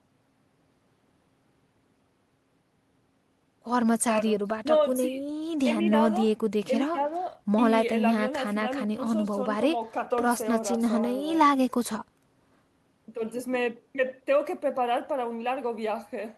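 No technical faults are audible anywhere in the recording.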